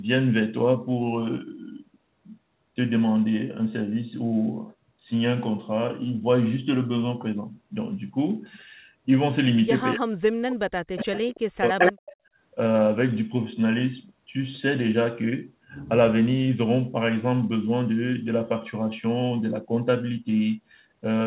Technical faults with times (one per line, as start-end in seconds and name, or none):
9.95-11.14 speech suppressed in double talk
10.96-11.40 echo leak
11.58-11.80 speech suppressed in double talk
11.79-12.16 echo leak
12.16-12.37 background gated by the echo canceller